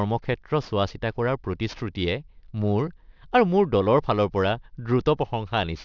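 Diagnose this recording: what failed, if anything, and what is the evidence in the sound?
Aliasing from a sample-rate reduction done without an anti-aliasing filter, a failure at the sample-format conversion stage. The speech content runs hard up to a ceiling at 6 kHz for the whole clip, which fits a drop to a 12 kHz rate. Energy that belonged above 6 kHz has folded back below it as unrelated tones, around 30 dB under the speech, so sibilants come out gritty and metallic rather than simply dull.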